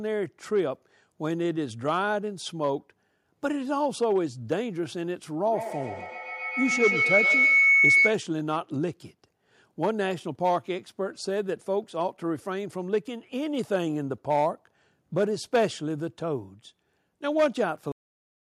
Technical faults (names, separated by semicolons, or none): feedback howl; cut-off end